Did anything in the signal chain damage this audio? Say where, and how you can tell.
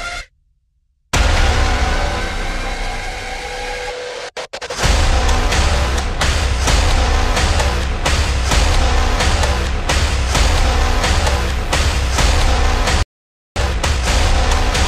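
Yes. Mains buzz runs from 10.35 to 12.53 s, a raspy 60 Hz buzz roughly 25 dB below the audio. Its harmonics reach well into the kilohertz range. This points to the analogue wiring, where switching spikes from a dimmer, rectifier or unshielded cable enter twice per mains cycle.

A playback stall at 13.03 s cuts the sound off in mid-flow, leaving about 0.53 s of silence until 13.56 s. This sits at the driver or buffer stage. The player likely ran out of data, or its output thread was blocked, before it recovered.

Time-compressed catch-up follows from 13.56 to 14.08 s. The audio runs at twice normal speed but keeps its pitch. The player is clearing its backlog by cutting out small slices and cross-fading across the joins.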